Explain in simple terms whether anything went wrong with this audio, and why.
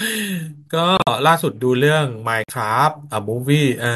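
Two short glitches interrupt the speech, one from 0.96 to 1.09 s and a second from 2.44 to 2.52 s. Both are a corrupt frame decoded: some of the stored data got scrambled, and the player decoded it anyway, putting sound at the wrong pitches. Each glitch sounds like a brief squeaky burst, which fits several damaged frames in a row. The first is a loud burst, and the second is noticeably quieter.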